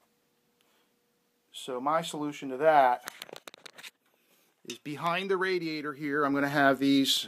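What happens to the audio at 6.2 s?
At 6.2 s the sound carries zipper noise, running from 5.85 to 6.60 s. The level moves by about 10 dB in unsmoothed 1 dB steps, around ten a second. Each jump clicks, so a ticking zipper rides on the sound.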